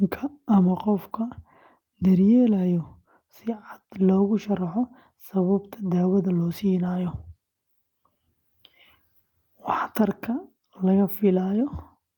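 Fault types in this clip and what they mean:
No fault types are present in this clip.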